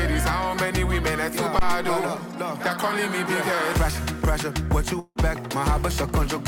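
At 1.59 s comes a phantom power thump. A supply switched on or off on the live input, and the step passed through the coupling capacitors. The deep thud decays in about 88 ms and ends by 1.98 s.

From 4.99 to 5.18 s, the audio becomes a fading buzz or hiss, then about 30 ms of silence. When it returns, 160 ms is missing. A long network dropout is the likely cause.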